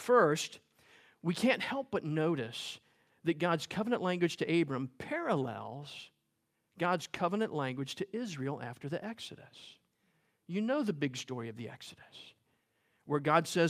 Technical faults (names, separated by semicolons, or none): none